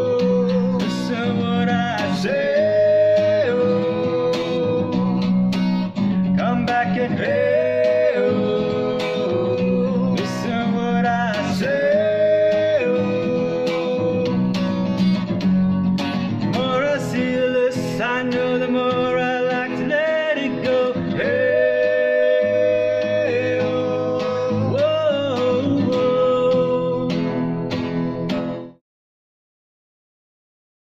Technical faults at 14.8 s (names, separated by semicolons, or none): none